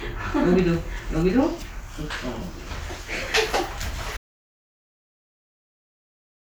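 At 4.17 s the sound cuts off abruptly and never returns, leaving silence with no room tone through to the end. This audio dropout to silence likely comes from the input being lost while the recorder kept writing silence.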